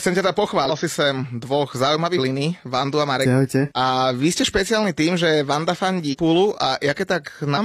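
Damaged data in a compressed stream shows up five times in this speech: at 0.65 to 0.71 s, 2.14 to 2.19 s, 3.21 to 3.26 s, 6.09 to 6.15 s and 7.53 to 7.58 s. Each time, corrupted bytes reach the decoder, which misreads the affected frames, loses sync and hunts for the next valid frame header. Every event lasts about 50 to 65 ms and cuts into the speech as a brief chirp, squawk, click or short hole.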